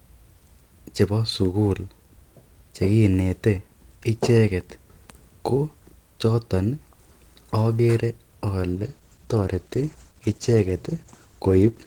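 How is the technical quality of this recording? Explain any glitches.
The recording has one clear fault, a call bitrate drop from 8.73 s to the end. The sound turns coarse and muffled, which points to the encoder falling from about 32 kbps to 13 kbps. With fewer bits, the codec quantises more roughly and discards high frequencies. A spectrogram would show the upper band abruptly cut away and blurred detail, while the waveform envelope stays largely intact.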